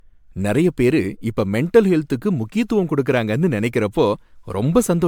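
Throughout the speech the sound is swirly, smeared and hollow, with blurred consonant attacks and nothing above 19.9 kHz. This is generation loss, likely from roughly ten MP3 passes near 140 kbit/s, each requantising on a shifted frame grid.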